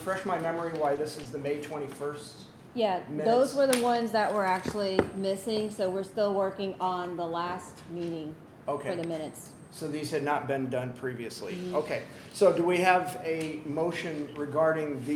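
At 0.95 s and again at 1.23 s there is short concealed packet loss: about 20 ms of audio failed to arrive at the decoder in time, and the receiver filled each gap by extending the preceding signal before crossfading back into the real stream. Each event spans roughly 40 ms including the blend, and sounds like a brief smear or wobble.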